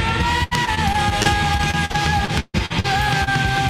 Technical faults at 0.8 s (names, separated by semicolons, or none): repeated packet loss (robotic sound)